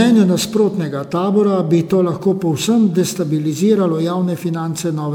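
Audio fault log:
throughout: generation loss. The speech was likely re-encoded as MP3 around five times, each pass requantising on a shifted frame grid so errors and spectral holes pile up. The result sounds swirly, hollow and smeared, with blurred onsets, which fits repeated 128 kbit/s passes. Nothing remains above 20.7 kHz.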